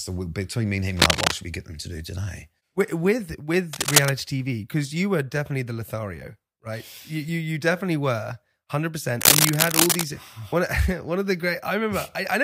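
Three bursts of cable scratch noise in this speech: dense, uneven scratching, a little louder than the speech, from 0.96 to 1.32 s (between "between me and him" and "should we get them"), 3.73 to 4.14 s and 9.21 to 10.06 s, likely a worn cable or connector being moved.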